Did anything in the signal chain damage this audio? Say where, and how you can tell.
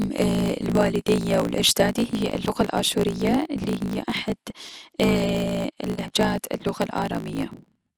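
Yes. At the codec, likely MP2 compression: the speech is dull and gurgling throughout, with granular flicker that a plain low-pass would not cause.

In the buffer stage, a block size mismatch (truncated): a steady 54.4 Hz buzz and speech 1.16 times fast with its timbre kept, consistent with 1024-sample blocks losing their tails. Resampling would shift pitch.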